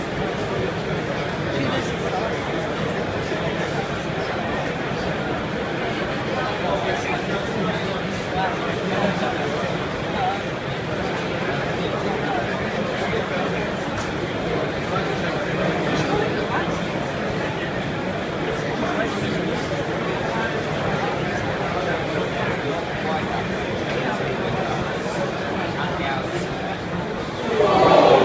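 No technical faults can be heard anywhere in the recording.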